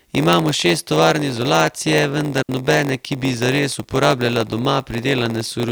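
From start to finish the speech carries a block size mismatch (padded). Each 512-sample block the reading stage takes in is only partly filled, and the remainder is zero, which fits writes of about 480 samples. Those regular silent slivers produce a steady buzz at 93.8 Hz, and the sound runs at 0.938 times normal speed while its pitch stays about where it should. That unchanged pitch and the evenly spaced buzz set it apart from dropped or repeated blocks, which jump or stutter instead.

From 2.43 to 2.49 s there is a digital wireless dropout. The receiver stopped getting enough usable data and muted for 60 ms behind a very quick fade, leaving a clean hole of near silence. No hiss, crackle or noise burst surrounds the gap, which distinguishes it from an analogue RF dropout or a squelch opening. The block buzz does not run through the hole, because the audio itself is muted there.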